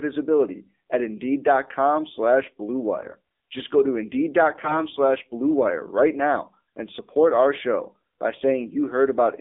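Throughout, the speech carries the AMR narrowband mobile codec sound. The band runs only from about 250 Hz to 3.7 kHz, and the buzzy, synthetic texture points to a low bitrate near 7.4 kbps. Unlike simple band-limiting, it is the crude vocal-tract model, not just the missing treble, that gives the voice its artificial edge.

From 2.98 to 3.15 s, and again from 4.58 to 4.84 s, AMR bit errors strike. Flipped bits misplace the excitation pulses and skew the finer parameters, so the voice turns hoarse, scratchy and gargly. Unlike lost frames, there are no gaps or muting, and pitch and level hold roughly steady.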